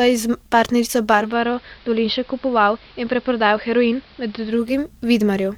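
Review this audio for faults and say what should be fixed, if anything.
After "s partnerico", from 1.09 to 4.78 s, the speech shows digital radio blending to analogue. A 278 ms cross-fade to the AM feed cuts the upper treble, drops level about 3 dB and adds hiss well below the speech. The spectrogram's top band goes blank over a faint noise floor, and the waveform steps down. Stronger reception, or locking the receiver to digital, would prevent it.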